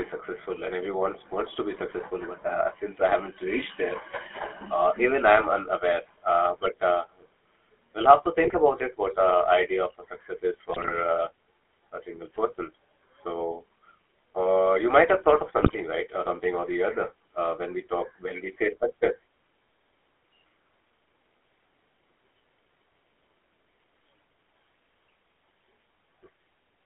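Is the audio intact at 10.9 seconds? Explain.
No. Right after "a success is", from 10.72 to 10.93 s, the sound breaks into squawks, pops and gargling. These are GSM bit errors. At about a 2% bit error rate, flipped bits reach the decoder across roughly ten consecutive frames and corrupt the transmitted filter, pitch and gain parameters. Each damaged frame is rebuilt with a distorted spectrum or a sudden jump in level, so the signal lurches and warbles until clean frames resume.

Underneath, and throughout the clip, the audio has a buzzy, gravelly roughness and a narrow, boxy tone limited to roughly 300 Hz to 3.4 kHz. That is the GSM full-rate codec, which fits a 13 kbps stream. It models the vocal tract as a filter and drives it with a sparse, regularly spaced pulse excitation that keeps only every third sample. The coarse excitation produces the grainy buzz, and the telephone band removes everything above about 3.4 kHz.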